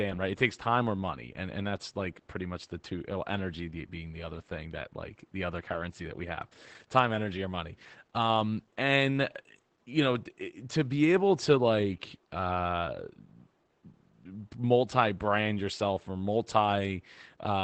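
Speech, carrying Opus voice compression damage from start to finish. The top of the band stops at about 8 kHz. The SILK linear-prediction coder models the voice with coarsely coded excitation, which leaves it muffled, hoarse and faintly robotic. The degradation is plainly audible and fits a wideband SILK setting at a low rate, around 12 kbps.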